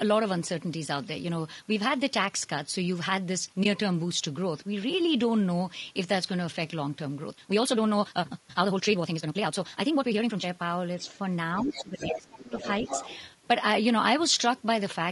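Low-delay AAC compression runs through the whole recording: the speech is plainly rough and grainy, with noise filling the gaps between harmonics and a synthetic-sounding top band. This likely comes from AAC-ELD at about 32 kbps, whose short frames resolve pitch harmonics poorly.

AAC frame loss with muting occurs at 3.63–3.66 s. One frame, roughly 20 ms, was lost and the decoder zeroed its spectrum. The overlapping windows fade the speech out and back in, leaving a brief dip.

Speech suppressed in double talk first appears at 10.96–11.04 s as a shallow dip of about 5 dB. It returns much deeper at 11.63–12.55 s, where the talker drops by about 20 dB for roughly a second. The echo canceller likely could not separate the talker from loudspeaker echo and turned both down.

The other side's voice leaking through follows in scraps at 11.01–11.18, 11.58–11.82, 11.98–12.42, 12.58–12.70 and 12.86–13.20 s. 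It ranges from faint, about 30 dB below the speech, to nearly level, about 5 dB below. This is likely loudspeaker playback that the echo canceller left in the microphone signal.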